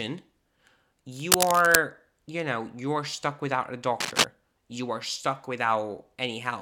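It's a speech clip with two bursts of cable scratch noise: a rough, crackly rustle from 1.15 to 1.76 s, sitting at about the same level as the speech, and a shorter one from 4.00 to 4.25 s that's a bit louder than the voice. That scratchy, uneven texture is most likely a worn lead or connector being moved, its contact resistance jumping around and spraying noise into the signal while it shifts.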